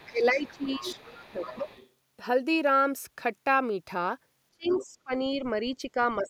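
From the start to 1.89 s a second voice sits roughly 20 dB under the main talker. This is the other side's voice leaking through, likely because the echo canceller left part of the loudspeaker playback in the microphone signal. Over nearly the same span, 0.1 to 1.69 s, the talker's own voice dips by up to roughly 15 dB for around a second in total. That is speech suppressed in double talk, likely because the canceller couldn't separate the talker from the echo while both sides spoke, and turned everything down.

From 4.51 to 5.41 s the voice drops much harder, by as much as roughly 30 dB over about 0.7 s. This is likely the same double-talk suppression. Inside that stretch, from 4.63 to 4.86 s, the far-end voice leaks through again at about 15 dB below the speech, likely from residual loudspeaker echo that the canceller missed.

From 5.75 s to the end a milder dip of roughly 10 dB takes away a fraction of a second, again likely double-talk suppression. 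Right at the close, from 6.26 s, a faint scrap of the other side's voice leaking through appears at about 25 dB down, likely a last trace of uncancelled echo.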